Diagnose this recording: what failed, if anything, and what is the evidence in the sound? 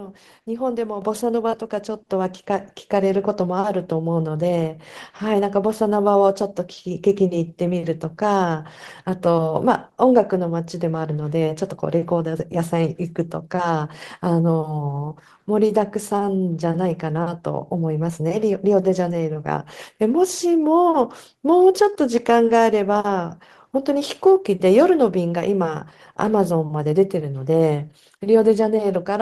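The microphone volume stepped up twice, at about 6 dB at 1.02 s and about 3 dB at 2.04 s, in call processing. Software raised the device's input gain in single steps, so voice and background noise floor jump together, unlike a gradual gain-control swell that eases in.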